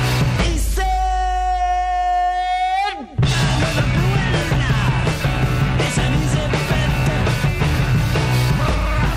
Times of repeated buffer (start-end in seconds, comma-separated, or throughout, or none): none